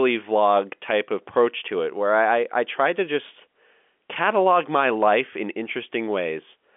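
No technical faults can be heard anywhere in the speech. It comes over a telephone line using G.711 coding, so the sound sits in a narrow band of roughly 250 Hz to 3.4 kHz, with nothing above about 3.7 kHz.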